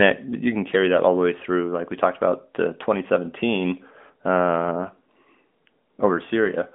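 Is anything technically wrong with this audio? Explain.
No, nothing is technically wrong with this audio.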